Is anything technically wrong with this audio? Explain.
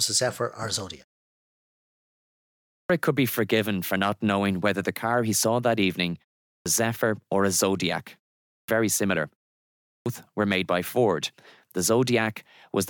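Yes. There is a clipped start after a pause at 2.71 s, 6.48 s, 8.49 s and 9.85 s. The output device drops out during silence and wakes late, cutting roughly 180 to 210 ms, so "could be forgiven for" and "were made by" begin abruptly.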